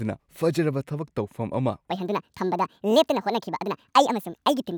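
Section at the wrong speed from 1.90 s onward: speech runs 1.66 times fast and about ten semitones high, likely a playback clock mismatch.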